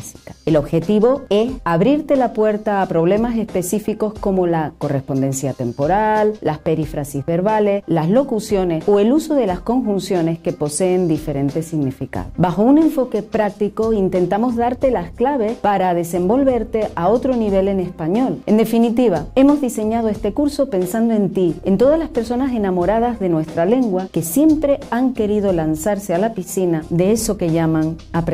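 No faults turn up anywhere in the recording.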